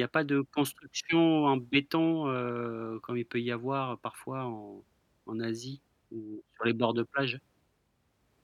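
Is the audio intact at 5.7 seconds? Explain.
Yes, the speech at 5.7 seconds plays through intact, with no audible dropout, glitch or distortion at that moment.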